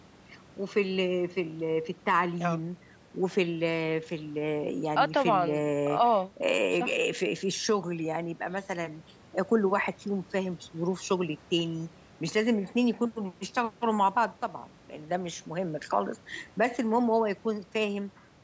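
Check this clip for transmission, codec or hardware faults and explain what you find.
Nothing here points to a transmission, codec or hardware problem: the speech has simply gone through ordinary call microphone processing, which trims the lowest bass and leaves nothing above 8 kHz, exactly as that path normally would.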